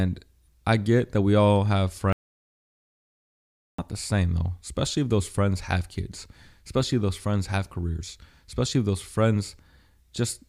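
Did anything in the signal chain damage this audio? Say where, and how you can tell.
Yes. After "that we all have", the sound cuts to total silence with no room tone from 2.13 to 3.78 s. This is an audio dropout to silence, likely a lost input while recording continued.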